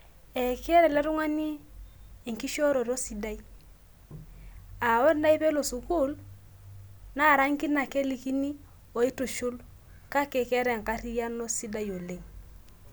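No technical faults can be heard anywhere in this speech recording. Nothing in it stands out as a problem at any point.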